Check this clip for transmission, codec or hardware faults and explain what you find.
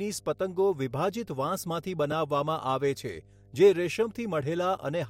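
Two faults are present: a constant mains hum and a single repeated buffer in the speech.

Mains hum runs through the whole clip as a steady 50 Hz tone, about 30 dB below the speech. A ground loop or nearby transformer is coupling the power line into the signal path, adding a low drone that persists under and between phrases.

A repeated buffer occurs at 2.12 s. The device ran short of fresh audio and played its last 10 ms block one extra time, with hard joins at each boundary. Because the block is so short, it comes across as a click or brief buzz rather than an audible stutter, and the sound continues after it with no noticeable gap.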